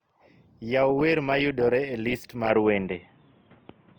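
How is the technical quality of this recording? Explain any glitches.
The recording has audible technical problems: a grainy codec coloring across the whole clip, and an abrupt drop in quality near the end.

Opus compression, throughout: the speech has the rough, noisy graininess of a lossy codec that, when short of bits, rebuilds band detail from folded or noise-filled content. Full bandwidth survives to about 20.1 kHz, but the damage is plainly audible and fits a low rate around 24 kbps in music mode.

Input switched to a poorer device, from 2.5 s to the end: with no gap, the sound suddenly loses everything above 3.8 kHz, turning dull and boxy, with a modest level change and a faint new noise floor, likely from the system changing to a narrower-band microphone or headset.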